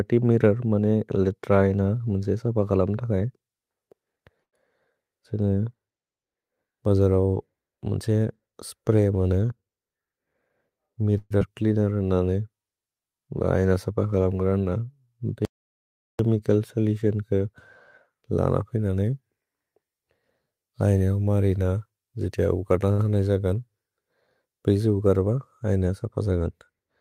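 It's a speech recording with a handful of network-style glitches. Around 4.43 to 4.55 s there's a short stall from a late packet: a packet turned up late, the jitter buffer ran dry, and the receiver just stretched the last bit of sound for about 92 ms before carrying on from the same spot, so nothing's lost but a sound hangs on a touch long. The same thing happens again at 22.92 to 23.01 s, with a hold of about 69 ms. At 11.18 to 11.32 s you get what sounds like a call audio freeze, likely from packets being held up in transit: the last sound gets smeared out for about 126 ms, trailing into roughly 10 ms of silence, then the audio resumes where it stopped with nothing skipped. Right after, at 11.40 to 11.43 s, there's a short concealed packet loss where about 40 ms never made it to the decoder; only a few milliseconds get papered over, so you hear a quick smear and the timing snaps back by about that amount. 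From 15.45 to 16.19 s there's an audio dropout to silence, a hard cut of about 0.74 s of silence with no room tone, whatever was there is simply gone. Then 18.29 to 19.37 s has a jitter buffer speed-up: the receiver trimmed tiny pitch-period slices to drain excess buffering, running at about 110% speed with pitch unchanged, shaving off around a tenth of a second, so that stretch sounds a bit rushed.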